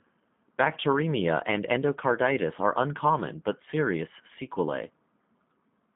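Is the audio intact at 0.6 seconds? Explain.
No. At 0.6 seconds the speech carries G.729 codec damage, which runs through the whole clip. The voice is rebuilt from a vocal tract filter, a pitch predictor and sparse pulses, which fits 8 kbit/s coding. It sounds rough and synthetic, limited to 150 Hz to 3.6 kHz, with nothing above 3.8 kHz.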